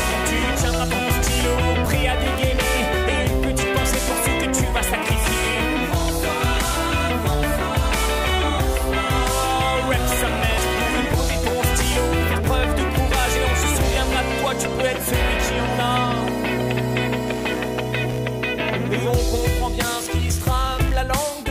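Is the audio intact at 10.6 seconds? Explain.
No. Damaged data in a compressed stream breaks the audio from 10.54 to 10.59 s, a gap of about 44 ms just before the moment asked. At that point the decoder met corrupted bytes, could not read the frames, lost its place and searched for the next valid frame header. The result is a brief glitch, where the sound breaks rather than continuing smoothly.

Computer activity noise also runs under the audio at 10.6 s, as it does through the whole clip. Changing load on the processor, graphics card or mouse pushes current through the ground that the audio circuit shares, and that ripple leaks into the sound. It is a buzzing, scratchy pulsing at roughly 70 times a second, sitting about 25 dB below the sound. It follows the computer's activity, not the audio itself.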